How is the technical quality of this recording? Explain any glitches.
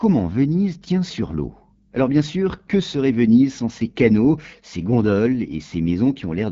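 The technical quality is limited by plainly audible low-rate codec damage that runs the full length of the speech.

AMR wideband (HD Voice) codec, throughout: content stops near 7.4 kHz, and the speech sounds rough and raspy. That fits one of AMR-WB's lowest modes, around 8.85 kbit/s, where the pulse-driven vocal tract model has too few bits to rebuild the waveform faithfully.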